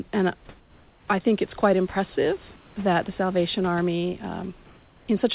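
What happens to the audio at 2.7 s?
Discontinuous transmission is the likely cause: in the pause after "think it's quite impressive", the sender appears to stop sending audio, and the receiver fills the gap with synthetic comfort noise in place of the background, from 2.56 to 2.76 s. For those 200 ms the real room noise, already about 28 dB below the loudest sound and limited below 4 kHz by the G.711 call path, becomes a steady, featureless hiss about 4 dB quieter until "that the" begins.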